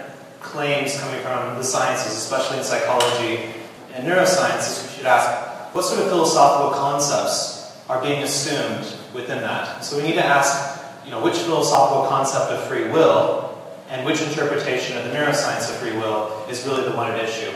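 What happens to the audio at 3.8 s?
At that moment the stream has an overlap between segments: two consecutive pieces of the stream, which fit a 2-second segment length, carry time stamps that overlap, so the player trims the shared stretch as if it had been delivered twice. About 20 ms of real audio, from 3.76 to 3.78 s, is discarded, and the waveform jumps straight across the gap. It comes through as a single sharp click or tiny skip in the sound.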